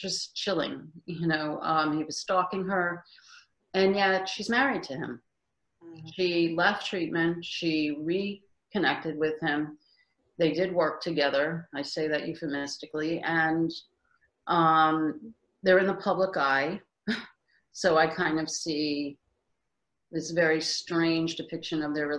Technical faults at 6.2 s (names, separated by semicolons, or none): none